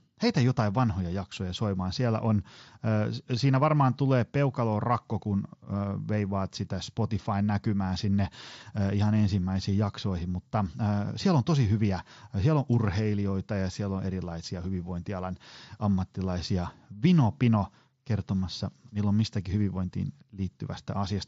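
No technical faults are audible anywhere in this recording.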